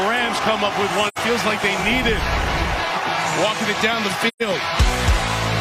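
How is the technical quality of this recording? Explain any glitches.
Two dropouts mar the recording, both AAC frame loss with muting. Around 1.08 to 1.18 s, and again from 4.28 to 4.42 s, the decoder lost coded frames and zeroed their spectrum. The gaps, about 85 ms and 128 ms, fit two and three missing frames. The overlapping transform windows taper the sound out before each gap and back in after it, so each one is a soft-edged hole of silence.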